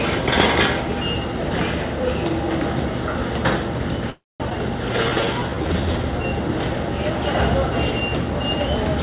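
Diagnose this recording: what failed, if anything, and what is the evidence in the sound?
At 4.10 to 4.42 s the sound stalls for about 0.3 s. The last sound trails briefly, then goes silent for about 220 ms before resuming where it stopped. This is a call audio freeze, likely from packets delayed on the network so the jitter buffer ran empty.

At 4.50 s playback leaps forward. Roughly 0.2 s of sound is gone, and the two sides are butted together with only a tiny join. This skip ahead is a network or buffer drop: a stretch was discarded while later packets were already queued.

From 4.93 to 5.99 s the sound plays slow, at about 82% speed, with pitch unchanged. It is drawn out and adds about 0.2 s. This is a jitter buffer slow-down: the receiver repeated pitch periods to rebuild its reserve. Above this, the call band stops at 4 kHz.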